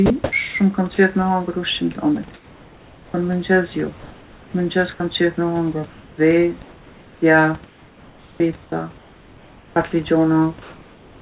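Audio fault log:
0.06–0.32 s, sound chopped by the voice detector: quiet word edges are replaced by comfort noise, leaving holes in the speech, likely because the sender's detector switched transmission on and off repeatedly.
0.94–0.98 s, 4.94–5.00 s (just before "qef me hongër"), 9.90–9.92 s, sound dropped by the voice detector: brief bits of speech are replaced by steady noise, likely because quiet speech was classed as background and not sent.
2.34–3.14 s, 5.9–9.92 s (after "qef me hongër"), 10.62 s to the end, comfort noise in place of the background: the real room background becomes smooth, featureless hiss, about 3 dB quieter in the first stretch, likely synthesized by the receiver during discontinuous transmission.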